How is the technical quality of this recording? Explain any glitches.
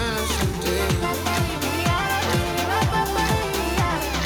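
No glitches or faults audible.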